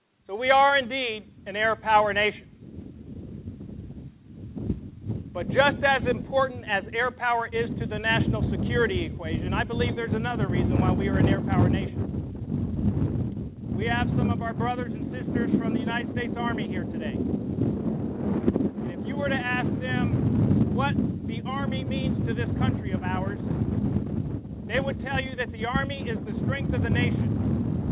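Nothing stood out on listening, with the sound arriving through the call path band-limited to below 4 kHz as a narrowband call would be.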